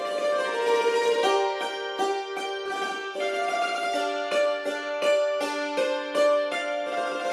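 At 2.65 to 2.67 s a skip ahead jumps over about 0.4 s of audio with no gap; the waveform and spectrogram splice abruptly where later, already-buffered audio follows directly. From 4.39 to 4.91 s a jitter buffer speed-up plays at 106% by trimming short pitch-period pieces, around 40 ms overall. The sound hurries at unchanged pitch, with harmonics staying level but slightly compressed in time.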